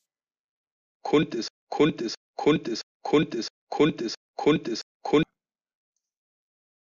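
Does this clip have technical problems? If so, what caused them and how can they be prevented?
Yes. From 1.48 s to 5.23 s the speech falls into a broken-record loop. A 0.67 s fragment plays six times back to back, most likely because the player, encoder or stream stalled and kept resending the last chunk it held. This differs from an echo because the repeats are exact copies that never fade, and the speech that belonged in that span is missing rather than overlaid. To prevent it, have the playback or streaming chain detect a stalled buffer and output silence or resynchronise instead of replaying stale data.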